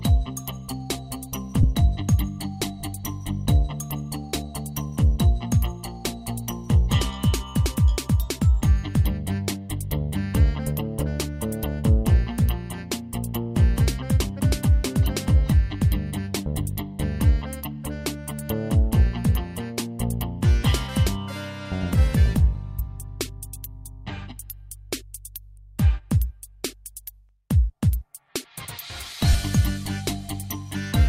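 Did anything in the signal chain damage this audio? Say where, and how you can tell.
Yes. The damage is in the Bluetooth link, where lost LE Audio frames left three brief gaps at 1.63 s, 22.54 s and 29.33 s. The first and last last about 15 ms, consistent with two 7.5 ms frames, and the middle one about 7.5 ms, consistent with a single frame. The LC3 decoder filled each gap by repeating the previous spectrum with randomised phase signs, so tonal content briefly turns into a short noisy smear.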